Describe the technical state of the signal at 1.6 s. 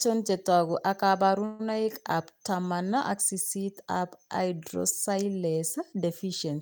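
At 1.6 s you're in a call audio freeze, running from 1.45 to 1.75 s, right after "chetogu ak". The last bit of sound gets stretched into a fading buzz or hiss for roughly 140 ms, likely because delayed packets drained the jitter buffer. Speech then picks up intact at "ab taman ak sisit", just running about 140 ms later.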